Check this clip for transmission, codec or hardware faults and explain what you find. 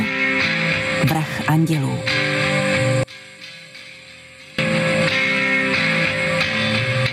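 Two faults are audible, one running through the whole clip and one brief.

Gain pumping runs throughout: the gain swings by around 20 dB, and the dynamics sound squashed. The likely cause is input gain set far too high, with a fast limiter clamping down on each peak. On a waveform the envelope looks flattened, with noise-floor bulges between peaks.

One channel inverted, from 3.03 to 4.59 s, makes the mono sum drop by about 30 dB, leaving only a faint residue. This is likely one channel with reversed polarity, so the shared centre content cancels. A spectrogram shows a near-empty band across that stretch.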